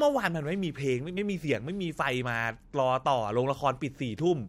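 At 1.16 s the speech is interrupted by a very short burst of damaged data in a compressed stream. Some bytes in the encoded file are wrong there, so the decoder misreads a frame and briefly loses sync before locking onto the next valid frame header. The result is a brief glitch lasting about 14 ms. On a spectrogram it shows as a thin vertical disturbance, unrelated to the surrounding harmonics. In the waveform it appears as a short glitch.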